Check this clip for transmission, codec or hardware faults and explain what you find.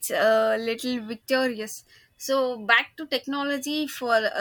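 Nothing wrong can be heard anywhere in this recording.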